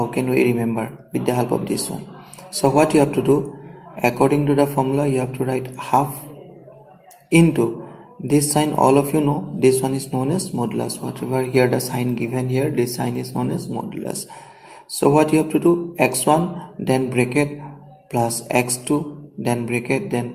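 No technical faults can be heard anywhere in this audio.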